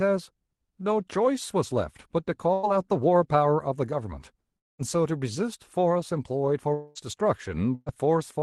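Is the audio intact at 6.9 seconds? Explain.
No. From 6.74 to 6.98 s the speech breaks into a buzzy, fading continuation of the preceding sound lasting about 217 ms, with no full silence, likely a long network dropout. About 180 ms of audio never returns, and playback resumes roughly 40 ms later than before.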